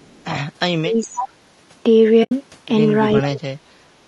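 Throughout, the speech has a rough, grainy texture with noise between harmonics and a synthetic top band, plainly audible and likely from low-delay AAC compression (AAC-ELD) at a low bitrate, around 32 kbps.

From 0.00 to 0.25 s there is an echo leak: a very faint copy of the voice, roughly 40 dB down and delayed about 412 ms. It is likely loudspeaker pickup that the far-end echo canceller did not fully remove.

From 0.67 to 1.37 s the speech is suppressed in double talk, dipping by as much as roughly 35 dB. This is likely the canceller turning down both the talker and the echo while both sides spoke. Within this stretch, from 1.02 to 1.07 s, the echo leaks again at the same 412 ms delay, now much louder, roughly 20 dB below the speech.

From 2.23 to 2.32 s there is AAC frame loss with muting: an 80 ms soft-edged hole, consistent with about four zeroed frames faded out and in by the overlapping windows.

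From 3.21 to 3.50 s the speech is suppressed in double talk again, dropping by roughly 30 dB. This is again likely the canceller attenuating overlapping talk.

From 3.78 to 3.97 s the background is gated by the echo canceller. The room sound drops by about 12 dB for around 0.2 s, then recovers when the canceller releases.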